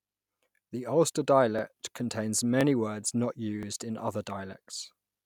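Overlapping chunks produce a tiny stutter in this speech at 0.57, 1.59, 2.61 (just before "words not"), 3.63 (between "words not" and "in other") and 4.65 s (just after "in other"). Each new one-second chunk begins about 21 ms before the previous one ended, so that sliver plays twice. Unlike a dropout, nothing goes silent. The sound briefly repeats itself, giving a click-like hiccup at a steady one-second rhythm.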